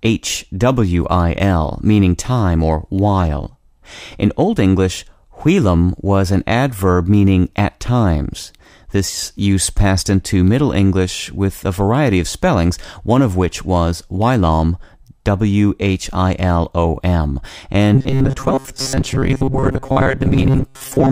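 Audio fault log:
17.95–21.12 s, robotic sound from repeated short buffers: the speech hardens into a rigid, metallic buzz locked at 134 Hz, still loosely tracing the syllables. Likely cause: audio arriving too slowly, so the player keeps looping its last fragment while most of the real signal, roughly two thirds or more, is skipped. A 134 Hz buzz points to a repeated segment about 7.5 ms long.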